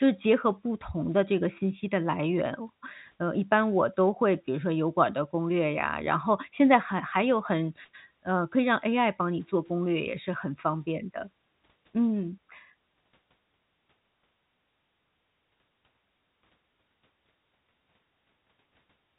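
No technical faults can be heard anywhere in the speech. The G.711 telephone coding is working as intended, with nothing above about 3.8 kHz and at most a faint trace of its quantisation noise following the level of the sound.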